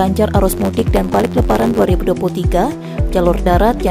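From 0.50 to 1.85 s, a 91.9 Hz buzz and a 1.07× speed-up at normal pitch: a truncated block size mismatch that discards each block's tail, fitting 512-sample blocks.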